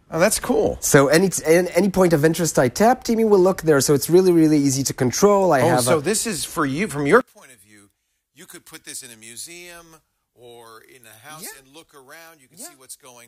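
From 7.21 s to the end, the mono sum drops by about 25 dB, leaving only a faint residue of the sound. The likely cause is one channel inverted in polarity, so everything shared between the channels cancels when they are combined.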